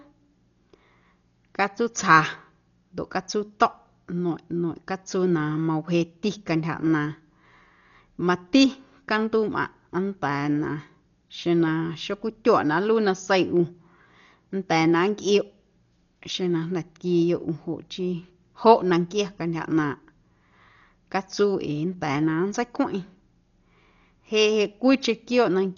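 Throughout the speech, nothing survives above 7 kHz, leaving it dull, with a rough, fluttering noise clinging to voiced tones. This likely comes from heavy Dolby Digital compression, consistent with a bitrate near 40 kbps. Starved bands are filled with dither noise rather than left silent, so it sounds grainy, not warbly like MP3 artefacts.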